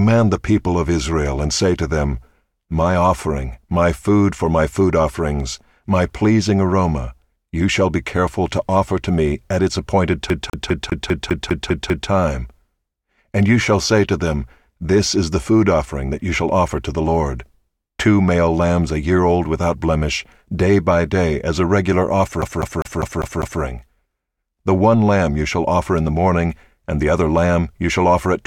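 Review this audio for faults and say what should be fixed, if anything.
Two spots where the CD is stuck on one turn: 10.30 to 12.10 s, right after "me at its appointed", and 22.42 to 23.62 s, after "day as a regular". A 0.2 s slice repeats 9 and then 6 times with a tiny mute at each jump, because the laser keeps getting thrown back a track by a scratch. Rip with error-correcting software, or clean the disc, and recapture those sections.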